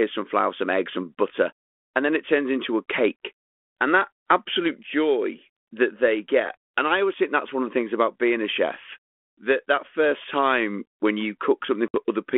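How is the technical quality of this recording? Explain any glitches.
The audio is telephone speech carried over G.726 ADPCM at 32 kbit/s, band-limited to about 250 Hz to 3.4 kHz with light codec roughness. It has one glitch.

At 11.88 to 11.96 s, just after "first time when you", there is packet loss on an ADPCM call. Several packets drop out, about 60 ms in all, and silence fills the gap. The hole has hard edges. The receiving decoder's predictor and step size lose track of the sender's. So the speech comes back with brief, slight distortion, then settles.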